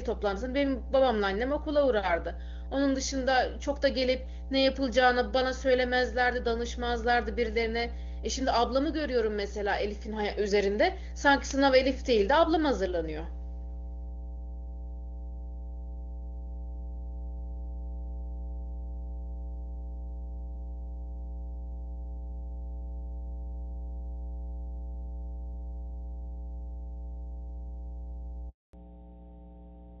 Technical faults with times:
0.00-30.00 mains hum
28.49-28.73 handover gap
28.73-30.00 fallback to narrowband

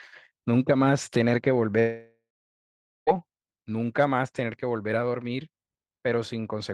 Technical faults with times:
1.79-3.10 long network dropout

